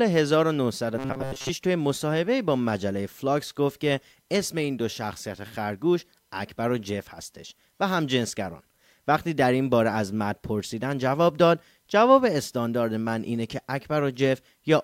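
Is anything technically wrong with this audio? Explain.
Yes. From 0.98 to 1.50 s there's robotic sound from repeated short buffers: a rigid 134 Hz buzz, likely from repeating a roughly 7.5 ms block while most of the real audio is skipped.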